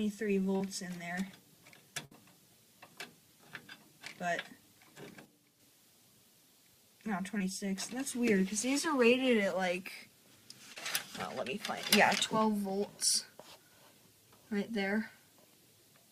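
Right at the start, 0.56 to 0.61 s, there's a short concealed packet loss: roughly 40 ms of audio didn't arrive in time, and the receiver papered over it by stretching the preceding sound forward before easing back into the real signal. You hear a quick smear rather than a hole. The same thing happens twice more, at 7.38 to 7.41 s (about 20 ms patched) and 10.73 to 10.77 s (about 30 ms). Each is a small wobble.

At 2.05 to 2.12 s there's a burst of packet loss, about 60 ms missing in one go. The concealment extends the last sound and fades it down as the gap runs on, so you get a brief held, dying tail. Then playback picks up further along, and whatever was in those 60 ms is simply gone.

Between 5.25 and 5.60 s, and again from 11.24 to 11.77 s, the level drops abruptly by about 6 dB and then snaps back. That's the signature of one channel dropping out, most likely one side of a stereo feed going missing before the mono fold-down. 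Anything shared by both sides halves in level, and anything that lived only in the lost side disappears for those stretches.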